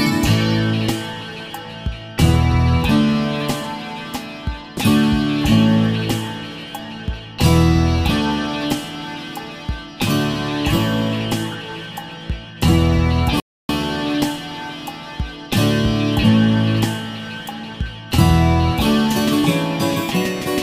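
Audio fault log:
13.4 to 13.69 s, rebuffering stall: the playback just stops dead for about 0.29 s, drops to silence, then carries on from exactly the point where it froze. Nothing's missing, so it's not a dropout; the player simply ran dry on downloaded audio and had to wait for the next chunk to arrive before continuing. That pause gets added to the clip's running time rather than replacing any of the sound.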